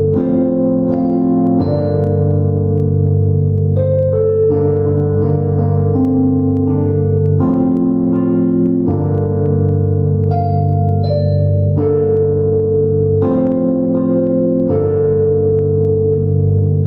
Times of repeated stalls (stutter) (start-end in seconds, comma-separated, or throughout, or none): none